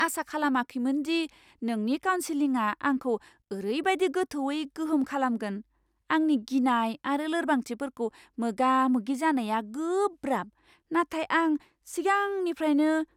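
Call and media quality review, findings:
Nothing stood out on listening to this speech recording.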